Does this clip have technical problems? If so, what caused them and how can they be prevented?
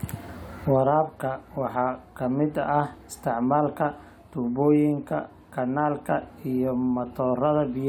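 No, there are no technical problems to point to in this speech recording. Since nothing has gone wrong, there is nothing here that needs preventing.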